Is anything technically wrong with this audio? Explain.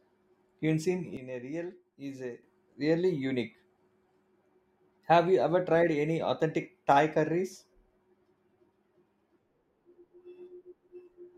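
Yes. From 1.17 s to 2.43 s there is a sudden gain jump: the speech and the background noise under it drop together by about 10 dB, then return at 2.43 s. The change is instantaneous, likely from a gain setting applied in one step without a ramp. Unlike a fade or compressor pumping, where the level glides, the shift happens between adjacent samples, and the noise floor moves in lockstep with the speech.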